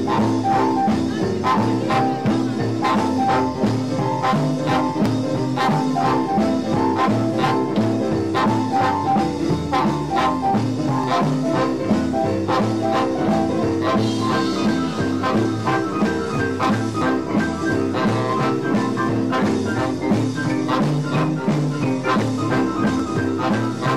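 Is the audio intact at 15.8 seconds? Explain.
Yes, the audio is intact at 15.8 seconds, with no dropout, glitch or other fault at that moment.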